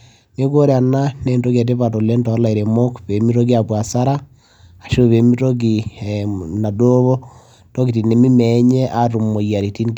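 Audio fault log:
0.00–1.52 s: crude rate conversion. Faint inharmonic fizz trails the speech, well below it. Unfiltered interpolation likely caused it, fitting a 44.1 kHz to 48 kHz change.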